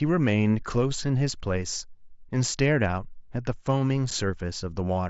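At 4.11 s there is a single burst of unconcealed Bluetooth headset packet loss. A gap of about 7.5 ms, which fits one lost voice packet on the mSBC link, was filled with silence or an idle pattern rather than concealed. It sounds like a brief hole in the speech, and the waveform shows a notch with abrupt edges, while a spectrogram shows a thin vertical slice.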